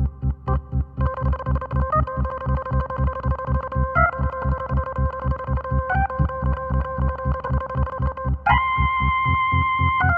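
From 6.51 to 7.06 s, repeated frames make the sound stutter: a 278.6 ms block, which fits a run of six compressed frames, plays twice more, adding 557 ms. A spectrogram shows identical patterns copied side by side, joined abruptly.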